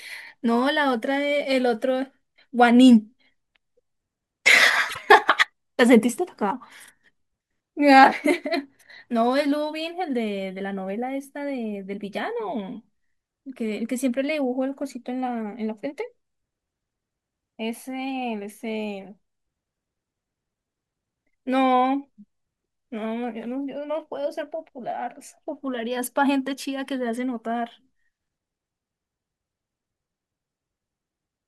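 Around 4.89 to 4.99 s there's a brief frames-out-of-order glitch: two neighbouring 24 ms blocks got swapped and decoded in that order, so the speech hiccups into a garbled flutter. No time goes missing.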